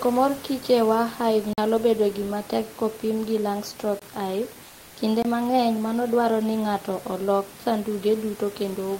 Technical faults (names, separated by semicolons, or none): block of digital silence; comfort noise in place of the background